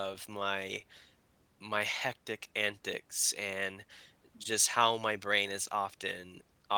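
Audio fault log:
Nothing stood out on listening to this speech clip.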